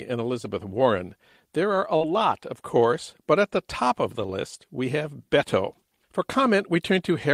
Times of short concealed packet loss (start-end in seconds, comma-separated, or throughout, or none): 0.42-0.45, 1.97-2.01, 4.27-4.29